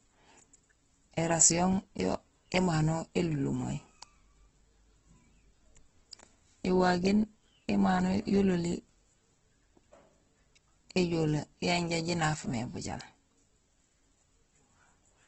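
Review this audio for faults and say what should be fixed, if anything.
Throughout, the speech stops at 8.1 kHz and sounds rough and grainy: likely Opus compression, with damage this heavy fitting a rate near 12 kbps. Re-encode from the original source at a substantially higher Opus bitrate.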